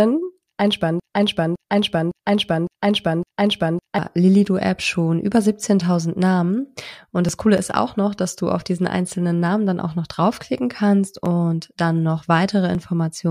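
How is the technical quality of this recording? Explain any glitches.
One glitch stands out: a broken-record loop from 1.0 s to 3.99 s. A 0.56 s fragment repeats exactly, back to back, five times. The player or stream likely stalled and kept resending the last piece it held. The audio that belonged there is lost.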